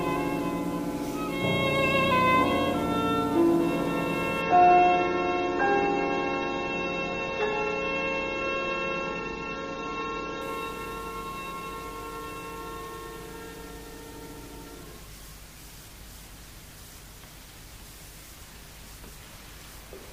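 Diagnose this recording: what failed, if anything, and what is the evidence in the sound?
Network stage: an adaptive stream at a lower bitrate from 4.42 s to 10.42 s. Quality switches abruptly, with no gap, to sound with nothing above 6.9 kHz and stronger codec artefacts, which fits a slowed connection forcing a step from 96 to 24 kbit/s AAC.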